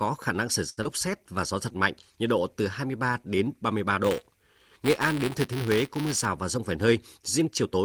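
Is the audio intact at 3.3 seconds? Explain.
Yes, the speech at 3.3 seconds is intact, with no dropout, glitch or other fault at that point.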